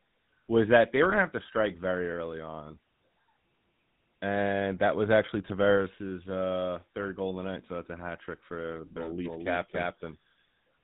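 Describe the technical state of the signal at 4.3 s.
At 4.3 s the speech carries the GSM full-rate codec damage present throughout: the vocal-tract model with sparse pulse excitation gives plainly audible buzzy, gravelly roughness, fitting a 13 kbps stream. A spectrogram shows nothing above 4 kHz.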